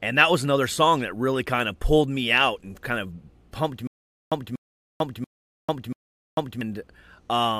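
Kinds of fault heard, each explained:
Stutter with silent gaps: from 3.87 to 6.61 s, just after "and kind of pumped", a 0.24 s fragment of speech replays four times, each followed by about 0.45 s of dead silence, a 0.69 s cycle, likely from a stalled stream retrying its last buffer and then running empty.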